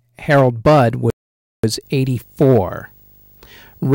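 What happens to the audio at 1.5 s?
At 1.5 s you're inside a playback stall: the speech cuts to silence from 1.10 to 1.64 s, about half a second, likely because the player briefly ran dry of data.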